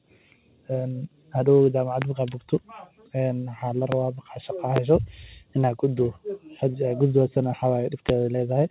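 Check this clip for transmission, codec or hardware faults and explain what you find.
Two kinds of fault are present in this speech: four loud pops and one short concealed packet loss, heard over call audio whose band stops at 4 kHz, consistent with G.711 mu-law.

Loud pop, at 2.02–2.05 s, 3.92–3.95 s, 4.76–4.80 s and 8.09–8.12 s: a single sharp transient, roughly 15 to 20 dB above the speech, likely a voltage step from a switch, plug or driver glitch, with speech continuing underneath.

Short concealed packet loss, at 6.71–6.77 s: about 30 ms failed to arrive, and the receiver extended the preceding sound to cover the gap, producing a brief smear before normal audio resumes.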